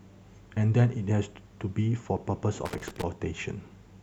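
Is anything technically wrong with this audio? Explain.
Yes. From 2.66 to 3.03 s the speech is broken up by loose connector crackle, a burst lasting about 0.38 s. A worn or dirty contact in the signal path is opening and closing in quick succession, so the audio is repeatedly chopped on and off, and any DC on the line adds pops. The result is an irregular scratching crackle laid over the speech for that stretch.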